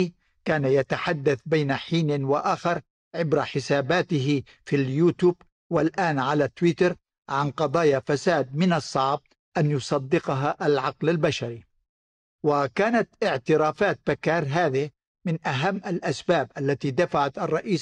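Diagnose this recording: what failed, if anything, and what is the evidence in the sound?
Nothing failed: no stage of the chain leaves an audible defect anywhere in the speech.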